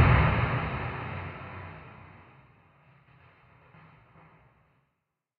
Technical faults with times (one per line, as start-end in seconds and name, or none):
none